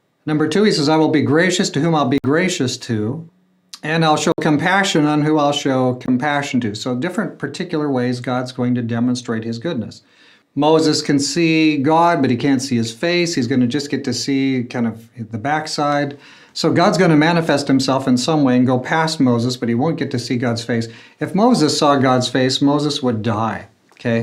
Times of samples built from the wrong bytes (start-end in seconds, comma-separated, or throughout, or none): none